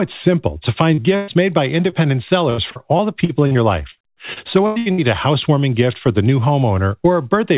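At 0.94 s a brief smear passes through the speech, a momentary wobble lasting about 40 ms. This is short concealed packet loss. That slice of the call arrived too late for the decoder, so the receiver bridged the hole by extending the preceding sound and then blended back into the real signal.

From 1.16 to 1.30 s, just before "made by", the sound hangs for about 120 ms, as a held buzz or fading tail, and then jumps ahead. This is a burst of packet loss. Several consecutive packets were lost, so the receiver kept continuing the last sound while lowering it, and the speech that should have filled that stretch is gone.

At 1.90 s, right after "made by", a second tiny smear of about 20 ms marks another short concealed packet loss, patched the same way.

Between 2.50 and 5.00 s, ending just before "a housewarming gift for", the speech turns choppy, with fragments dropping out. This is repeated packet loss. 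Packets kept going missing across this span, the longest hole lasting about 96 ms, and each hole was filled by extending the prior sound before the next one arrived. About a fifth of the stretch is concealment rather than real audio.

Throughout the clip nothing is heard above 4 kHz, which fits a narrowband G.711 call path.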